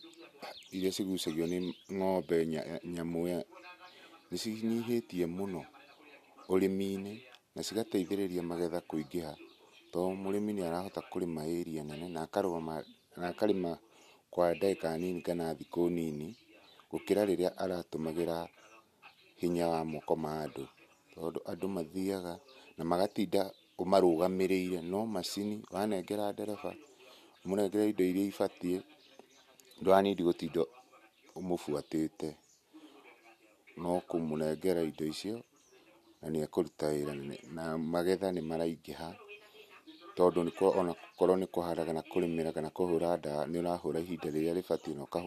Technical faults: none

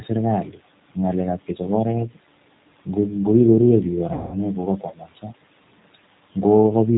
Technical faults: G.729 codec; speech cut by the noise suppressor; VoIP packet loss concealed by the speech codec

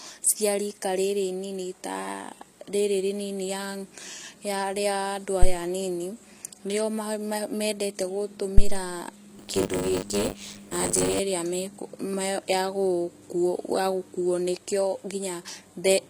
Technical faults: HE-AAC compression; phantom power thump; buffer tearing

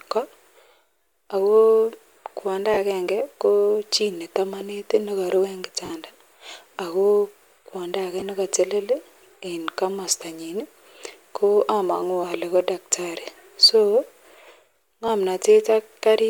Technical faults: lost LE Audio frames

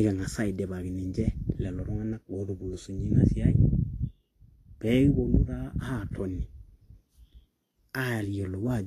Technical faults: Vorbis compression

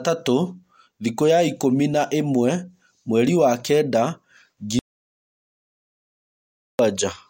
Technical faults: audio dropout to silence

